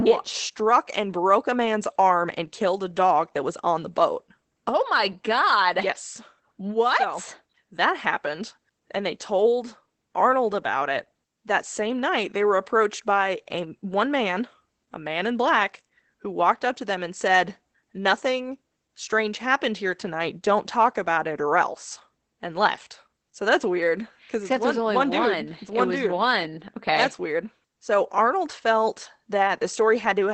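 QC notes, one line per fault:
Throughout, Opus voice compression. The speech is plainly damaged by the codec. Nothing remains above 8.6 kHz, so the top of the band is gone and sibilants sound dull. The coder models the voice with linear prediction and spends few bits on the excitation. That coarse residual gives the speech a hoarse, slightly robotic edge. The muffled, narrowed sound points to SILK-style voice coding at a low bitrate, which fits roughly 12 kbps.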